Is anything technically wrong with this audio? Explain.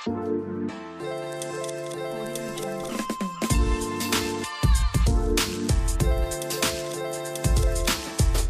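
No, nothing in this audio points to a technical fault.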